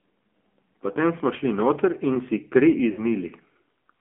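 From start to end, the speech carries the sound of the AMR narrowband mobile codec. The band is squeezed to roughly 250 Hz to 3.4 kHz. Nothing bright survives above that. The codec rebuilds the voice from a vocal-tract model and a few pulses, not from the waveform itself. At this low rate the damage is plainly audible. Speech sounds buzzy and synthetic. The coarseness fits a 7.4 kbps mode.

At 2.92 s comes a burst of lost AMR speech frames, lasting to 3.07 s. About 60 ms of coded speech never arrived intact, which fits three lost 20 ms frames. The decoder filled the hole by repeating its last good pitch and vocal-tract settings at falling gain. The result is a short, smeared stretch. The sound drags on briefly, then sags in level before normal decoding resumes.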